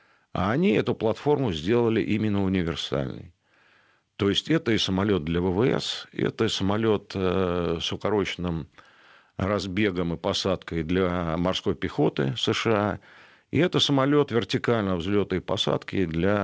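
Nothing stood out on listening to this speech recording.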